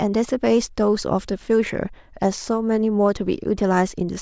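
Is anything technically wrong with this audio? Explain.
No, nothing technical stands out in this speech recording: the signal stays steady and intact throughout, with no disturbance to its level, timing or frequency content.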